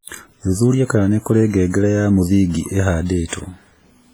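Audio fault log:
throughout: WMA compression. The speech has a ringing, washy quality with a hiss that swells and fades along with the voice, and quieter detail seems thinned out. This points to a low bitrate, around 24 kbps, and heavy coding damage. The likely cause is a transform codec such as WMA. Its quantisation noise smears across long blocks, and weak spectral lines are dropped to zero.
3.28 to 3.32 s: pre-echo. A short hiss runs ahead of a sharp attack, lasting about 44 ms. The attack itself sounds soft and smeared. The attack comes late in a coding block. The noise allowed for the loud part is spread across the whole block. So it also fills the quiet gap just before the onset, where nothing masks it.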